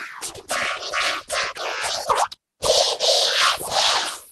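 Nothing goes wrong anywhere in this one; the sound just comes through the call link the way an ordinary call would, with the top end easing off around 12 kHz.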